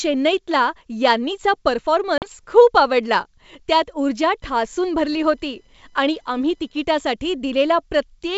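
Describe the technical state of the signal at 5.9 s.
At 5.9 s the speech carries computer activity noise. It runs from about 4.42 s to 6.85 s. Changing load in the computer's processor, graphics card or mouse disturbs the ground shared with the audio circuit. That ground movement leaks into the signal as a fast chirping buzz, pulsing at around 1 kHz. It sits well down, roughly 40 dB below the speech. It follows the machine's activity, not the speech. The wideband G.722 coding leaves it audible.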